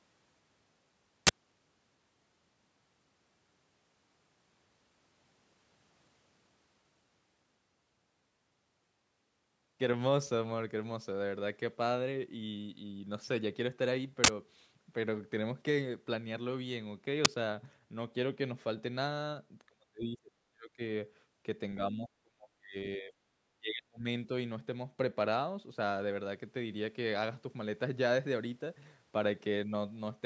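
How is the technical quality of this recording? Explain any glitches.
The recording has two kinds of glitch: three bursts of digital noise and a stretch where the talker's level collapses repeatedly.

Uninitialised buffer: bursts at 1.27 to 1.29 s, 14.24 to 14.28 s, and 17.25 s. Each lasts about 11 to 43 ms. Audio was played from memory before real samples arrived. The garbage sounds like a sharp, loud crackle. The lengths fit buffers of 1024, 2048 and 512 samples.

Speech suppressed in double talk: dips at 19.69 to 20.81 s, 21.76 to 22.77 s, 22.96 to 23.13 s, and 23.46 to 24.06 s. The voice drops sharply, by roughly 35 to 40 dB at worst, but less, by roughly 10 dB, in the short third dip. It fades in and out in pieces. The likely cause is an echo canceller that was confused by both sides talking at once and turned down the near talker. The call's microphone processing, which leaves nothing above 8 kHz, is not a glitch.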